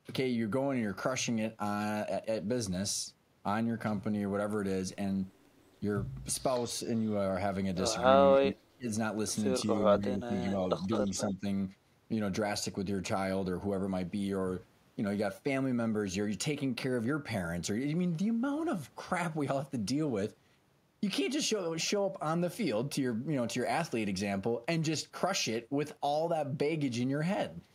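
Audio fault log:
8.36–8.88 s, 9.99–10.59 s, 11.07–11.14 s, 11.32–11.45 s: speech suppressed in double talk. The voice dips, deepest near 35 dB at first, likely from the echo canceller ducking during overlap, showing as sudden waveform notches and faded spectrogram bands.
10.50–10.54 s and 10.9–11.23 s: echo leak. A faint, then clearer copy trails the voice by 202 ms, likely residual loudspeaker pickup, visible as a delayed duplicate of harmonics.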